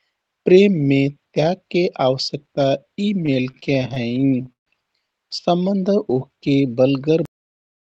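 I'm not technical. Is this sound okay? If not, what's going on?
No. There are three separate problems, and they sound like a shaky internet call.

Repeated stalls (stutter), from 3.21 to 4.68 s. The data carrying the sound kept arriving late, so the receiving side kept running out of sound to play. Each time, it stretched the last bit of sound to fill the hole, about two dozen times, the longest hold lasting 140 ms. Nothing is lost, but 412 ms of stand-in sound makes that stretch drag and stutter.

Jitter buffer slow-down, from 5.89 to 6.55 s. The receiver keeps a small reserve of incoming sound to smooth out delays. Here that reserve was running short, so it quietly repeated tiny slices of the sound to rebuild it, adding 62 ms. The speech plays at about 92% speed but keeps its normal pitch, so it sounds slightly drawn out.

Cut-off end, at 7.25 s. The final stretch of sound was never delivered or played, so the audio stops abruptly mid-sound and drops straight to dead silence for the rest of the clip. 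There is no natural fade, and a small click may be audible at the cut.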